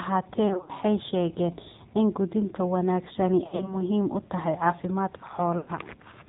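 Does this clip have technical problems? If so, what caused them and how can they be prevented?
Yes. The speech carries plainly audible AMR narrowband mobile codec damage throughout. Nothing above 4 kHz survives, and the voice sounds buzzy and synthetic, which fits a low mode around 7.4 kbps. Simple low-pass filtering would only muffle the voice, not add this buzz. Using a wideband codec or a higher bitrate mode prevents it.

Lost AMR speech frames occur at 0.48–0.71 s, at 3.44–3.76 s between "in quudinta wanaagsani" and "muhiim u tahay", and at 5.58–5.71 s. The decoder stretches the last good sound and fades it instead of cutting abruptly or clicking as a plain dropout would. Stronger radio coverage and better error protection prevent it.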